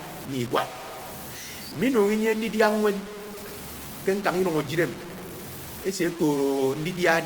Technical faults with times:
0.00-7.26 low bit depth without dither

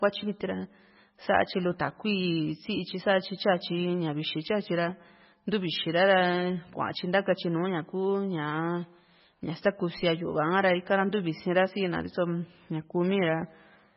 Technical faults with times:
0.00-13.96 MP3 compression

